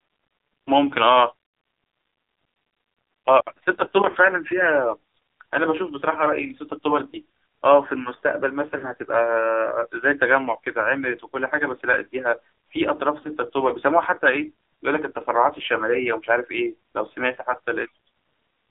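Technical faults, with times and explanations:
Throughout: AMR narrowband mobile codec. The speech is confined to a telephone band of roughly 300 Hz to 3.7 kHz, so it sounds thin and boxy with no air above. The heavy buzzy, synthetic quality suggests one of AMR-NB's lower modes, around 5.9 kbps. At that rate the coder rebuilds the speech from a simple vocal tract model excited by only a few pulses per subframe, so much of the natural texture is lost.
4.10 to 4.17 s, 7.10 to 7.18 s, 8.78 to 8.86 s and 13.22 to 13.29 s: lost AMR speech frames. Each is a short dip or warble lasting well under a tenth of a second. The events at 4.10 s and 8.78 s have the longer gaps, about 40 ms, which suggests two consecutive frames were lost. The ones at 7.10 s and 13.22 s are consistent with a single 20 ms frame. In each case the decoder fills the gap by repeating the last good pitch and vocal tract settings at reduced gain, so the sound smears briefly and comes back rough for a moment.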